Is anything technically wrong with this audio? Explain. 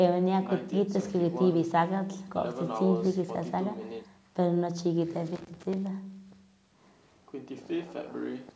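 Yes. From 5.36 to 5.74 s the speech carries loose connector crackle: a worn or dirty contact keeps making and breaking, chopping the signal and popping with any DC present. The result is an irregular scratchy burst, unlike the evenly spaced ticks of digital clicks. The 8 kHz top end reflects the call's microphone processing.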